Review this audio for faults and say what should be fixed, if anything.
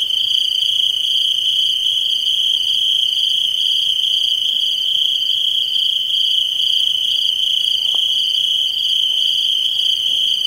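Nothing needs fixing; there are no defects introduced along the recording or playback chain.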